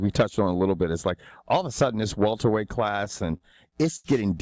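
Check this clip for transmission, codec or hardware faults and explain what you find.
There's one fault: a run of repeated stalls, a stutter, from about 2.96 to 4.06 s. Over that stretch the playback catches seven times, the longest hold around 80 ms, adding up to roughly 0.19 s of filled-in sound, about 17% of that span. Packets were showing up late, so the jitter buffer kept running dry and the receiver stretched the last bit of sound to bridge each wait. Nothing is actually lost, but it drags and hiccups. The call codec path itself, with its top end stopping at 8 kHz, fits G.722.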